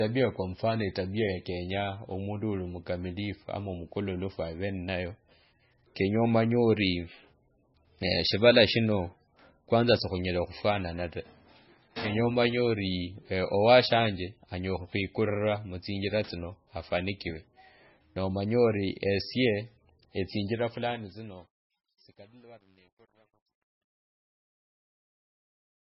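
The recording is speech carrying heavy codec damage throughout, most likely from MP3 compression at a very low bitrate, with the sound pointing to something around 16 kbps. Nothing is present above 5.6 kHz, a hard ceiling rather than the gentle roll-off of a dull microphone. The starved encoder drops weak frequency lines that flicker in and out between frames, giving a watery, swirling texture and smeared consonant onsets that set it apart from plain low-pass filtering. From 20.42 s to the end, a fade shows truncation distortion: a volume stage kept too few bits, consistent with about 11, and added no dither. As the level falls, the waveform collapses into coarse steps, and from 21.27 s to the end the tail turns gritty. Unlike steady background noise or hiss, this grit rises as the sound gets quieter and tracks the signal rather than staying fixed.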